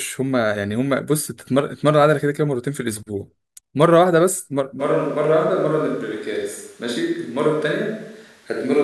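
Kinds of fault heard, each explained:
Switch to a distant microphone: from 4.81 s to the end, the speech turns abruptly roomy and hollow, at much the same level, with background noise roughly 35 dB below it. The likely cause is the close microphone dropping out, leaving a more distant one recording.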